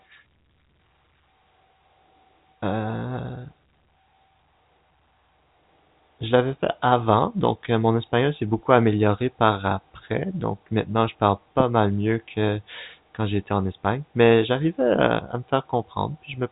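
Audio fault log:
Nothing stood out on listening to this speech, which comes through the narrow telephone band of G.711 coding with nothing heard above about 3.8 kHz.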